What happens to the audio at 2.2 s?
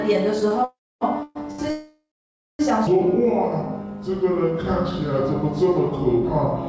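At 2.2 s the sound is in the middle of a call audio freeze, running from 1.70 s to 2.61 s. The last sound is stretched into a buzz that fades, then about 0.56 s of silence. This is likely a jitter buffer running empty while packets were held up. The receiver filled roughly 0.89 s, and when delivery resumed the audio picked up where it stopped. Nothing was lost, but everything after is about 0.89 s late.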